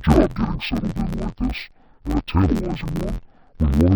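From start to finish the speech sounds dull and robotic, with a steady buzz at about 86 Hz laid over it and no clear drop in pitch. This is interleaved audio read as planar: each block of alternating left and right samples is split into a first half treated as left and a second half treated as right, each replayed at half speed. The blocks are only 11.61 ms long, which fits a 512-sample block, so the damage becomes a block-rate buzz rather than an octave shift.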